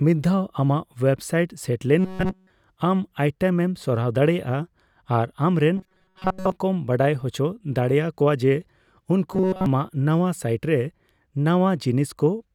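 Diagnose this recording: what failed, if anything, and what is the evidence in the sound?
Robotic sound from repeated short buffers appears in the speech at 1.99–2.50 s, 5.77–6.52 s and 9.33–9.66 s. Each stretch becomes a rigid metallic buzz fixed at 188 Hz. The first stretch is replaced entirely by repeats, and the other two mostly. The failure is likely at the driver or buffer stage: a loop of roughly 5.3 ms is replayed while real audio is skipped. On a spectrogram this shows as flat, evenly spaced harmonics at multiples of 188 Hz. On a waveform, identical cycles repeat.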